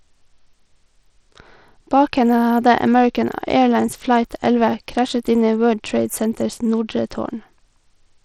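Bluetooth SBC compression, throughout: a plainly audible gritty coding noise rides on the speech, with nothing above 18.3 kHz. This is likely a starved SBC bit pool, fitting roughly 80 kbps.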